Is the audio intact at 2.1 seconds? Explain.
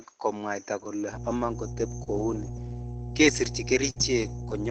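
No. A mains hum runs from 1.11 s to the end, so it sits under 2.1 s. A steady 60 Hz tone has leaked into the signal, likely through a ground loop or a nearby transformer. It is strong, only a few decibels below the speech, and is heard as a constant low drone. On a spectrogram it is a bright unbroken horizontal line at 60 Hz, with fainter lines at its low multiples. On the waveform it is a regular ripple riding under everything.

Just before 2.1 s, from 2.03 to 2.08 s, there is a short stall from a late packet. A packet arrived after it was due and the jitter buffer ran dry. The receiver stretched the last sound by about 30 ms to bridge the wait, then resumed where it left off. Nothing is lost, but the sound hangs slightly too long with a slight buzz or dip. On a spectrogram the harmonics run flat and smeared for that stretch. On the waveform one short cycle pattern repeats.

Overlapping the end of that stall, from 2.06 to 2.08 s, is a lost packet rebuilt from error correction. 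The same kind of 20 ms repair comes again at 2.18 to 2.20 s. In each case a packet went missing, and the decoder played a low-bitrate copy carried in the following packet. There is no gap, but those frames sound rougher and noisier. On a spectrogram each shows as a 20 ms patch with grainier, less defined harmonics, set against the 8 kHz ceiling that the Opus call path imposes throughout.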